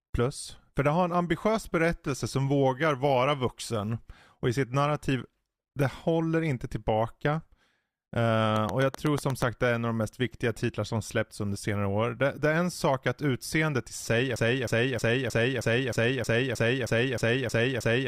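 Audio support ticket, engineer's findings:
Train of clicks, 8.56–9.43 s, ending just before "det är en av". Around seven similar pops at a regular 8.1 per second, peaking about 15 dB above the speech. Spectrogram shows evenly spaced thin vertical broadband lines. Likely faulty connection or nearby-equipment interference.

Broken-record loop, 14.36 s to end, after "utseendet i sig är". A 313 ms fragment repeats back to back about twelve times, and the following speech is lost. Waveform shows identical repeating blocks; spectrogram shows a tiled pattern. Likely a stalled player or stream buffer.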